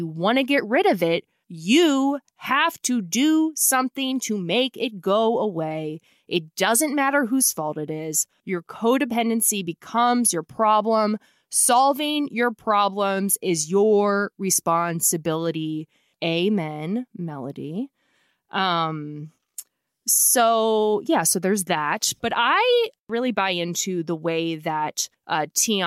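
No technical faults can be heard anywhere in the recording, and the signal holds steady throughout.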